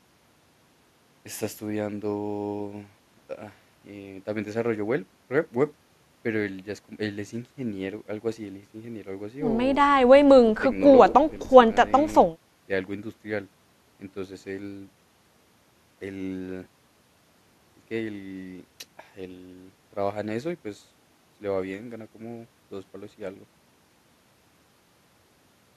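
No technical faults are audible anywhere in the speech recording.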